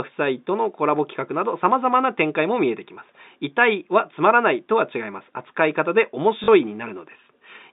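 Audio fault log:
6.44–6.48 s, packet loss with last packet repeated: about 40 ms of speech drops out over the telephone-band line, and the last chunk gets replayed to fill the gap. That fits two 20 ms packets, giving a quick robotic stutter.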